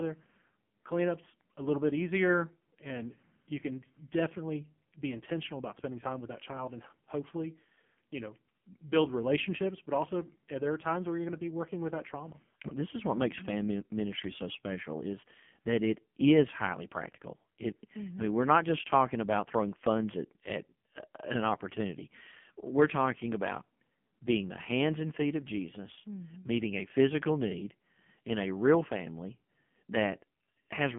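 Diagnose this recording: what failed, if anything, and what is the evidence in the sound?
Codec stage: AMR narrowband mobile codec throughout. Nothing above 3.5 kHz survives, and the speech sounds buzzy and synthetic, which points to a very low bitrate near 6 kbps.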